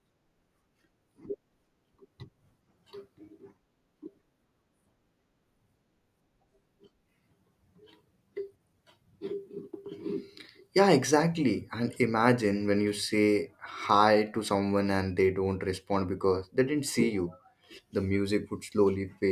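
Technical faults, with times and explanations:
No technical faults detected in the speech recording.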